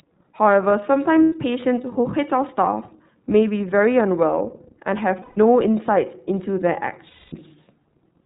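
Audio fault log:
throughout: iLBC codec. The speech is plainly band-limited, with nothing above 4 kHz. Each frame's excitation is coded on its own, which fits 30 ms frames at about 13.3 kbps. Voices sound clear but rough and slightly synthetic.
1.23–1.33 s, 5.22–5.38 s, 7.07–7.33 s: lost iLBC frames. Gaps of 90, 150 and 240 ms are filled with a repeated pitch cycle mixed with noise. Each sounds like a held, buzzy vowel, fading more in the longest. Clean speech returns almost at once.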